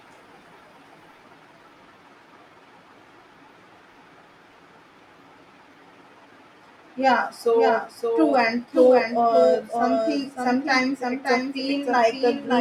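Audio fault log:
Throughout, doubled audio track: every bit of the speech comes round a second time about half a second later, only a few dB quieter, so it's like two copies of the same take running out of step. The echo has no decay and no room colour, and it keeps the full bandwidth of the original. That points to the same signal being mixed in twice, most likely picked up again through a slower path or left stacked from an edit.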